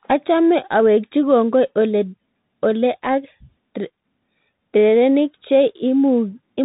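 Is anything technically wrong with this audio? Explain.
Yes. Throughout, the audio has passed through a Bluetooth CVSD headset codec, which encodes only a rising or falling step each sample, consistent with a 64 kbps one-bit stream. The speech loses everything above 3.8 kHz, sibilants turn scratchy, and a grainy hiss sits underneath.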